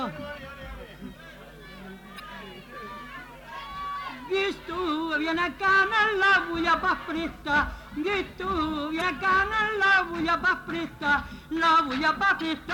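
At 2.16–2.20 s, 8.98–9.02 s and 12.37–12.42 s, damaged data in the compressed stream produces short glitches lasting about 44 ms. Corrupted bytes make the decoder misread frames, lose sync and hunt for the next valid frame header.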